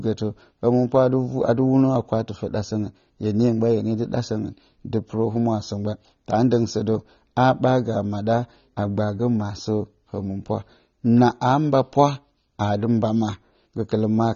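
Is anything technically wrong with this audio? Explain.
Yes. Throughout the speech, everything above 7.2 kHz is gone, leaving dull, smeared sibilants with a warbling fizz. This is likely AAC compression at a low bitrate around 24 kbps. A spectrogram shows a hard ceiling.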